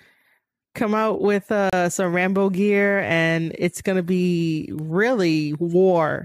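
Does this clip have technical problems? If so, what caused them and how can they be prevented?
Yes. At 1.70 s the speech drops out abruptly for about 31 ms, ending at 1.73 s: a short hole of silence with hard edges on both sides rather than a fade. This is a gap between stream segments. The timestamps of two adjacent segments, here around 6-second chunks, leave a small space between them, and the player fills that space with silence. Nothing is missing from the speech; the timeline is just stretched. To prevent it, segment and stamp the stream so each segment's start time matches the previous segment's end exactly.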